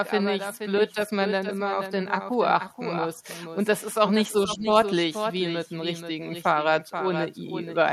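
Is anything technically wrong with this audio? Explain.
Yes. The clip has two faults.

A doubled audio track runs through the whole clip. A second copy of the speech trails the original by about half a second, roughly 10 dB quieter. It is full-band and dry, with no decay or room colour. It sounds like a quieter, exact repeat of each phrase. The likely cause is the audio being picked up a second time through a slower path, or an edit leaving two copies out of step.

Speech is suppressed in double talk from 4.56 to 4.66 s. For about 100 ms the voice dips by up to about 10 dB. The likely cause is an echo canceller that could not tell the local talker from loudspeaker echo while both sides spoke. It turned everything down at once. The result is a brief dip in the speech.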